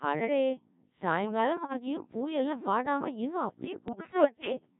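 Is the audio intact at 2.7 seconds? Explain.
No. The whole clip passes through the Codec 2 vocoder, which rebuilds speech from pitch, voicing and envelope as sine waves. The heavy robotic buzz fits a bitrate near 1.3 kbit/s, unlike a codec's watery artefacts. From 2.13 s to the end there is also Wi-Fi interference: a nearby radio's beacon, rectified by the audio circuit, ticks faintly every 102.4 ms, well below the speech. Its steady rhythm sets it apart from random clicks.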